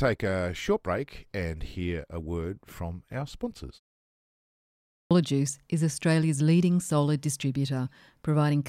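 Clipped start after a pause at 4.88 s: following a silence of about 1.2 s, the first 0.23 s of the next stretch of speech, up to 5.11 s, never reaches the output. The playback device dropped into an idle state during the gap and had not yet woken or relocked when sound resumed, so the opening sounds are swallowed and the speech bursts in abruptly, rather than rising naturally out of the quiet.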